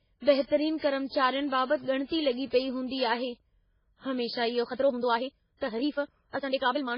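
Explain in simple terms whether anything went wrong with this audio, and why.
Several things went wrong. The whole recording sounds dull and watery. This is likely heavy MP3 compression. The encoder had too little room to store the sound, so it cut off the treble. It also dropped quieter details, which flicker in and out and give speech that swirly, underwater quality.

There is also pre-echo, twice: from 0.78 to 0.82 s, and from 1.07 to 1.12 s. Each time, a short hiss arrives just before a sharp sound starts, lasting about 42 and 48 ms. The compression handles sound in small chunks. When a sudden burst sits late in a chunk, its noise leaks backward into the quiet moment before it. The burst itself then sounds softened.

Finally, there is a time-stretched section from 4.58 s to the end. The speech suddenly runs about 1.66 times faster, yet the pitch stays the same. Software likely squeezed this stretch to fit a shorter length. 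To keep the pitch, it cut out tiny slices of sound. That makes this part sound rushed.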